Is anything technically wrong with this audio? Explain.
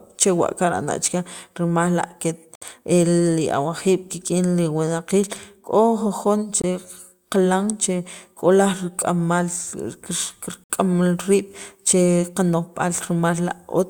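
Yes. Gaps between stream segments occur at 2.55, 6.62 and 10.64 s, 4 s apart. Segment timestamps don't meet, so the player inserts hard-edged silences of 62, 22 and 61 ms. No audio is lost.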